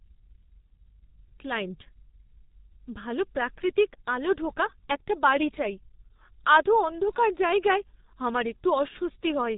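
G.723.1 codec damage runs from start to finish of this speech clip. The coder squeezes each 30 ms frame into a very small parametric description, and the heavy degradation here fits its 6.3 kbit/s mode. Nothing above 3.8 kHz survives, so the sound is muffled and dull. Because the vocal model updates only once per frame, voicing comes out hoarse, and consonants smear into one another instead of landing crisply.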